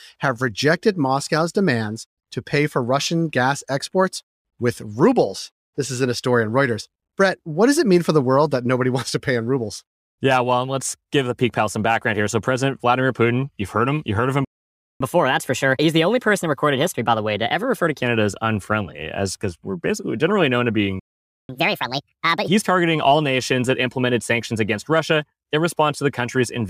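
Sample clock jitter runs through the whole speech clip: timing wobble under a microsecond adds a faint hiss, roughly 45 dB below the signal, strongest on loud, bright sounds. A spectrogram shows it as a diffuse high-frequency haze that follows the speech energy and disappears in the pauses.

At 14.45 s a playback stall cuts the audio for 0.56 s, likely because the player ran out of buffered data. From 15.01 s to 18.01 s a catch-up at higher speed plays the backlog at 1.15 times normal, lifting pitch about two semitones. The waveform shows a flat gap, then denser cycles; the spectrogram shows harmonics shifted upward.

A second stall silences the sound from 21.00 s to 21.49 s, a blank 0.49 s strip on the waveform. Catch-up from 21.49 s to 22.48 s runs at 1.5 times speed, raising pitch roughly seven semitones, so harmonics jump visibly higher before dropping back.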